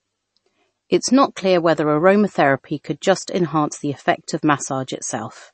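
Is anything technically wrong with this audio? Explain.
Yes. Throughout the speech, there is MP3 compression, likely at a very low bitrate around 32 kbps. The encoder cuts everything above 8.3 kHz and drops weak frequency lines that flicker between frames. The result is a watery, swirly texture and chirpy s sounds, which a simple low-pass filter wouldn't produce.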